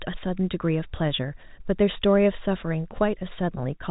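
The speech comes through with no technical faults, carried over ordinary G.711 mu-law telephone coding at 64 kbps, with the band stopping at about 3.8 kHz as that telephone format would give.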